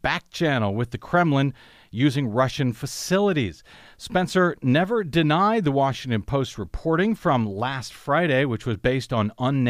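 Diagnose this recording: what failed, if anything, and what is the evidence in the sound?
Nothing in the chain has failed: the speech signal arrives continuous and intact, with no audible sign of trouble at any stage from capture to playback.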